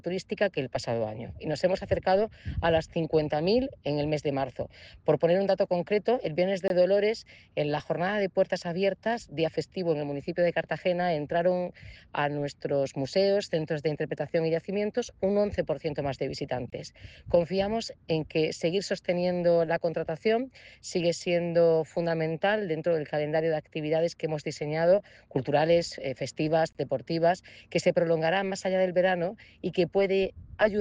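At 6.68, 16.70 and 26.73 s the sound drops out for about 23 ms each time, then picks up exactly where it left off. That's a gap between chunks: the audio seems to have been delivered in 10-second pieces, with a sliver of silence inserted at each join, maybe from padding or a late start on each piece. Nothing goes missing, but you hear three short holes spaced exactly ten seconds apart.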